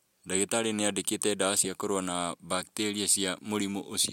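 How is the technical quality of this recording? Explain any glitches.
No glitches turn up anywhere in this recording, so there's nothing here to explain.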